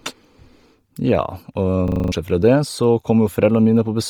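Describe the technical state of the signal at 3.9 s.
At 3.9 s the speech carries the heavy damage of Bluetooth LC3 compression, likely present across the whole clip. The sound has a breathy, grainy edge, which fits a low bitrate near 32 kbps, with 10 ms frames. A spectrogram shows the upper band sparse or noise-filled.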